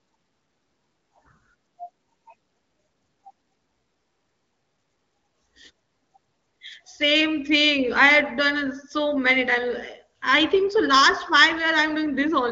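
Nothing stood out on listening to this speech, which comes through an AMR wideband (HD Voice) codec path with nothing heard above roughly 7.6 kHz.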